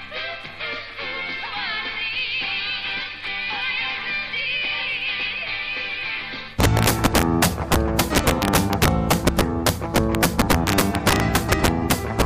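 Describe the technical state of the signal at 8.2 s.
At 8.2 s the signal sits inside a stretch of integer overflow running from 6.60 to 12.22 s. Gain drives peaks about 5 dB past the largest integer value, and instead of being limited they wrap to the opposite sign, producing violent cracks far harsher than clipping.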